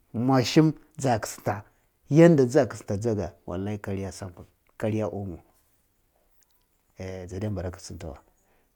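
No technical faults can be heard anywhere in this speech clip.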